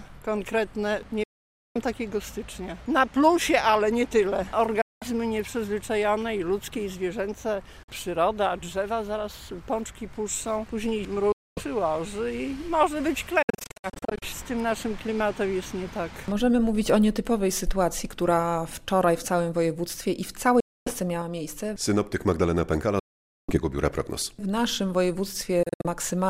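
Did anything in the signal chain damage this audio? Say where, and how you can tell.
Yes. The sound drops to silence at 1.23–1.80, 4.81–5.06, 7.83–7.89, 11.32–11.61, 20.60–20.92 and 22.99–23.58 s, and breaks into clusters of short gaps at 13.42–14.24 and 25.63–25.87 s. The gaps point to a likely Bluetooth dropout on the wireless playback link, where packets arrived too late and were discarded. A buffer underrun pauses the audio and then picks up where it stopped. Here the audio resumes further along, as if it had kept playing through each hole.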